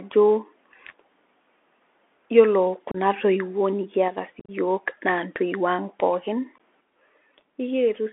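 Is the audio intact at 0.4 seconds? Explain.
No, at 0.4 s the speech is already inside the Bluetooth CVSD headset codec that runs the whole clip. Its one-bit adaptive steps leave a 250 Hz to 3.5 kHz band, scratchy s sounds and granular hiss.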